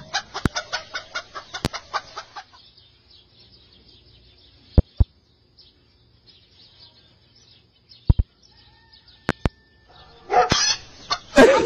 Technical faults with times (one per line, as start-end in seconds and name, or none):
0.46-0.49 loud pop
1.65-1.68 loud pop
4.78-5.03 loud pop
8.10-8.22 loud pop
9.29-9.49 loud pop
10.52-10.55 loud pop